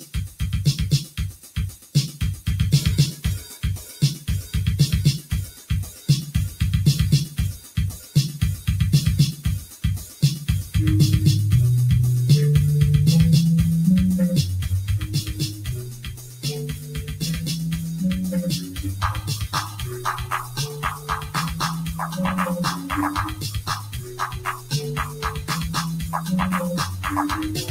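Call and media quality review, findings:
Noise suppressor applied to music or sounds, whole clip. Level pumps and thins, with gain swinging by around 15 dB. A speech-tuned suppressor is classifying sustained tonal content, ambience and reverb tails as noise. Transients pass while held material is pulled down.

Sound cut by the noise suppressor at 0.0–1.95 s, 3.5–4.02 s, 5.22–6.08 s, 7.58–8.15 s, 9.65–10.22 s, 15.53–17.22 s and 18.59–26.29 s. Drops reach about 7–13 dB. The longest stretch, 18.59–26.29 s, is attenuated for roughly half its span. Decays are truncated as the suppressor clamps steady sound.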